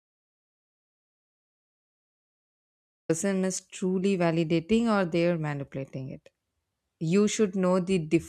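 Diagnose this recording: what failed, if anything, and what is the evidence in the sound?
The recording opens in an audio dropout to silence: from the start until 3.09 s there is silence with no room tone, then the speech cuts in mid-flow. The likely cause is a lost input at the device or link stage while the recorder kept writing zeros.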